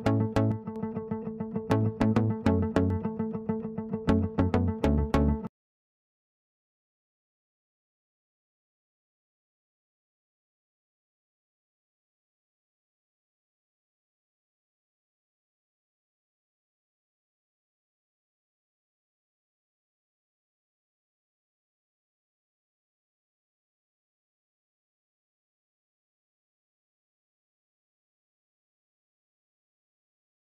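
At 0.52 to 0.76 s and again at 5.45 to 6.18 s the level drops abruptly by about 6 dB, then returns just as suddenly. This is most likely one channel dropping out, with the mono sum losing half its shared content and anything unique to that side.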